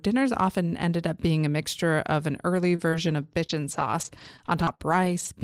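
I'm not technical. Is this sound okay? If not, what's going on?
No. From 2.75 to 5.27 s, just after "mixture of an early", the speech has scattered short gaps. About seven tiny pieces of audio went missing, the longest around 50 ms. The player covered each hole by stretching the last sound, so you hear brief ticks and hiccups.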